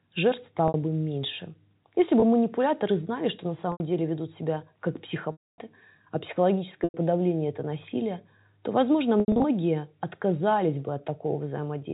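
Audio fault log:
0.68–9.44 s, packet loss with pitch repetition: gaps at 0.68, 2.2, 3.72, 5.32, 6.84 and 9.2 s, lasting 20 to 260 ms, are bridged by repeating the last pitch period. The shorter ones sound like a briefly held buzz; the 260 ms gap fades to silence before the sound cross-fades back in.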